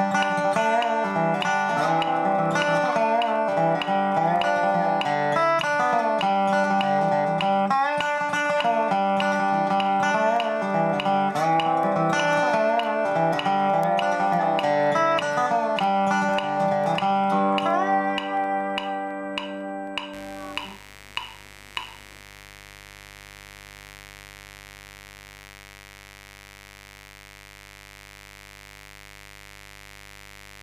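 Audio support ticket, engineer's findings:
Mains buzz from 20.13 s to end of clip, roughly 25 dB under the signal. Raspy, not a smooth hum: sharp spikes twice per 50 Hz cycle, harmonics into the kHz range. Probable dimmer, rectifier or unshielded cable coupling in.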